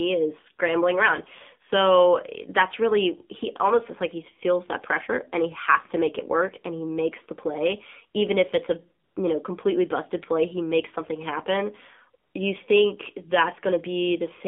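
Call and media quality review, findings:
AMR narrowband mobile codec, whole clip. Speech band-limited to roughly 200 Hz to 3.5 kHz, nothing above. Plainly buzzy, synthetic timbre from pulse-excited vocal-tract model with sparse bits, which fits a low AMR-NB mode near 7.4 kbps. Component: mobile leg.

AMR comfort noise, 9.04 to 9.16 s and 12.24 to 12.34 s. Real signal replaced by smooth, steady synthetic noise for 120 ms and 100 ms, switching in and out. Mechanism: sender's discontinuous transmission judged silence, halted speech frames, and the receiver generated noise from coarse level and spectrum parameters.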